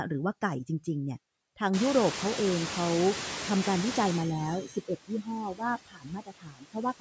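Noise suppressor artifacts run through the whole speech clip. Steady noise is pulled down by about 20 dB, sinking between the words and rising under them. Room noise jumps by about 24 dB near 1.5 s, and the noise suppressor is catching up from 1.73 to 4.24 s. Noise passes with only about 11 dB of cut, then sinks over 2.5 s. Speech is cut by the noise suppressor at 4.67 to 4.91 s, dropping about 13 dB for a brief moment. It happens again from 5.08 s to the end, about 22 dB deep across roughly a second and a half. Those passages sound swallowed and faint.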